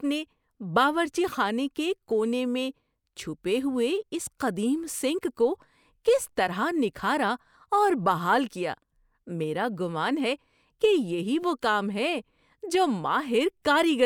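No audible technical faults occur anywhere in this speech recording.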